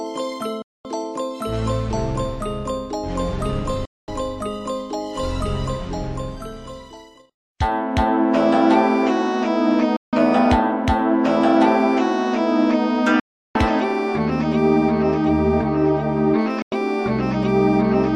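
Digital broadcast dropouts hit at 0.62, 3.85, 9.96, 13.20 and 16.62 s: the receiver lost good frames, so the sound snaps off almost instantly for 100 to 350 ms, then returns with that stretch missing.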